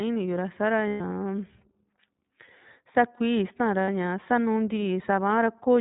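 From start to finish the speech carries iLBC codec damage: band-limited below 4 kHz, plainly rough and synthetic, consistent with the 15.2 kbps, 20 ms-frame mode. At 0.88–1.01 s and 3.84–3.89 s, lost iLBC frames are concealed by repeating the last pitch cycle with added noise, heard as a brief buzzy held vowel before clean recovery.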